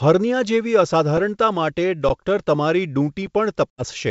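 Underruns with held sample occur at 2.09 s and 3.27 s in this speech recording. In each, the output buffer runs dry and the converter freezes on its last value for about 13 ms and then 5 ms, leaving a flat stretch. A roughly equal slice of live sound is lost. Packet loss on an ADPCM call follows from 3.70 to 3.85 s. About 80 ms of audio drops to hard-edged silence, which fits a handful of lost packets. The decoder's predictor and step size then disagree with the sender's, so the speech returns slightly distorted before settling. The wideband telephone character, with hiss faint or absent above 4 kHz, points to G.722 coding at 64 kbit/s.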